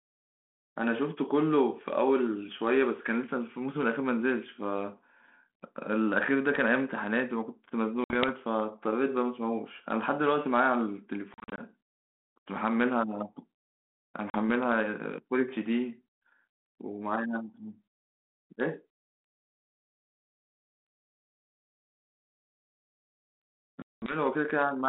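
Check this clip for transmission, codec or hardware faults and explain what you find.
Four dropouts are audible, all packet loss on an ADPCM call, heard through a narrow 200 Hz to 3.4 kHz telephone band with the light coding damage of 32 kbit/s G.726.

At 8.04 to 8.30 s, 11.34 to 11.61 s, 14.30 to 14.38 s and 23.82 to 24.16 s the speech drops into hard-edged silence. It then returns slightly distorted, settling after a few tens of milliseconds.

The gaps total 60 ms, 140 ms, 40 ms and 200 ms, which fits runs of about three, seven, two and ten 20 ms packets. The 11.34 s loss is scattered over 240 ms, with no hole longer than 40 ms, so it sounds choppy rather than like one gap. During each gap the receiver hears nothing and substitutes silence. Because ADPCM sends only the difference from a prediction, the decoder's predictor and step size have drifted away from the sender's by the time audio resumes. 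The first samples after each hole are therefore rebuilt wrongly until the two sides realign.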